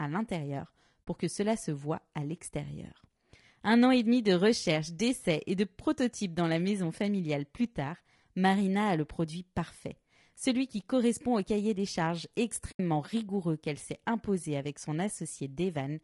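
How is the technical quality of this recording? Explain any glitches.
The recording is degraded throughout by coding damage, with two short dropouts.

Low-delay AAC compression, throughout: the sound is plainly rough and grainy, with noise filling the gaps between pitch harmonics and a thin, somewhat synthetic top band. The likely cause is AAC-ELD, the low-delay codec used in video calls. Its very short frames separate closely spaced harmonics poorly and spend bits inefficiently, so at a rate that fits around 32 kbps the spectral detail breaks down into this texture.

AAC frame loss with muting, at 1.07 s and from 12.71 to 12.80 s: the audio briefly fades out and back in, leaving soft-edged holes. When coded frames go missing, the decoder substitutes silence for their spectrum. The overlapping windows then taper the surrounding audio into and out of that gap. The first hole is very brief and points to about two lost frames. 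The second is longer, consistent with about four.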